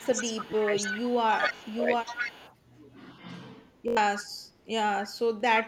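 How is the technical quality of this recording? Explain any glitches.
The recording has clear technical faults: the talker is ducked during overlapping speech, a delayed echo comes back, and there are two stutters.

Speech suppressed in double talk: from 0.0 to 1.12 s and 1.38 to 1.88 s the voice dips by up to about 15 and 20 dB. This is likely an echo canceller turning down both its own talker and the loudspeaker echo, and unlike a dropout it tracks the overlap.

Echo leak: a copy trails the voice by 296 ms at 0.0–1.79, 2.02–2.55 and 4.16–4.23 s, about 5 to 15 dB below it. It is likely loudspeaker pickup slipping past cancellation, and the fixed delay sets it apart from room reverb.

Repeated buffer: at 1.56 s and 3.88 s, a 21 ms piece replays two and four extra times, which fits a 1024-sample buffer. It has hard joins, so it sounds like a short stutter rather than a gap.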